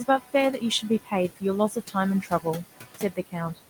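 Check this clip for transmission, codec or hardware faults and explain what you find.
Three faults run through this speech clip: computer activity noise, noise suppressor artifacts, and five stretches of speech cut by the noise suppressor.

Computer activity noise, present from start to end: as the processor, graphics hardware or mouse draw changing current, the shared ground under the audio circuit shifts, and that shift leaks into the signal. Here it is a buzz pulsing at roughly 300 Hz, sitting around 20 dB below the speech. It follows the machine's workload rather than the talker, so it jumps up and drops back with the computer's activity, not with pauses and speech.

Noise suppressor artifacts, throughout: the suppressor estimates steady background in each frequency band, frame by frame, and pulls those bands down, by about 17 dB here. The room noise, about 14 dB under the speech, drops away in the gaps and climbs back beneath each phrase, so the background seems to breathe.

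Speech cut by the noise suppressor, at 0.05 to 0.34 s, 0.81 to 1.12 s, 1.70 to 1.95 s, 2.22 to 2.46 s and 2.72 to 3.35 s: in these spans the suppressor mistook parts of the speech for background and attenuated them along with it, by about 13 to 18 dB, deepest in the last span. Only a fraction of each span is hit, roughly a tenth to four-tenths of a second. Soft consonants and word endings there sound swallowed or faded.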